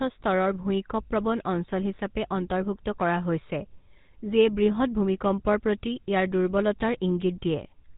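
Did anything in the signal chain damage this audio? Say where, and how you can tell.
Yes, at the codec stage: the speech passed through a GSM full-rate codec, which rebuilds the voice from a vocal-tract model driven by a thinned, regularly spaced pulse excitation. That gives the plainly audible buzzy, gravelly roughness throughout, fitting a 13 kbps coder, and nothing above 3.8 kHz.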